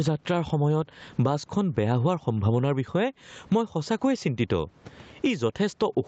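A speech recording with gain pumping running through the whole clip. The gain swings by around 20 dB, so loud and quiet passages sit squashed close together. This is likely from input gain set far too high and a fast limiter clamping each peak. On a waveform the envelope looks flattened. A spectrogram shows the speech energy beneath the 8 kHz ceiling.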